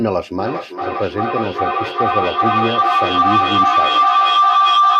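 Speech with feedback howl from 0.39 s to the end. A tone near 1 kHz builds, pulsing roughly every 400 ms, and peaks about 7 dB above the speech. A microphone-to-loudspeaker loop gains level each pass and narrows to its favoured frequency.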